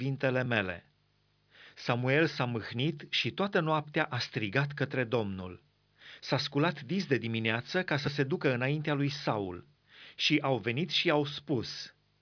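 No technical faults can be heard in this recording.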